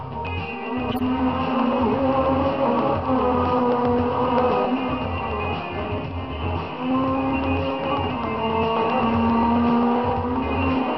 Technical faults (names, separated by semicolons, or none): corrupt frame decoded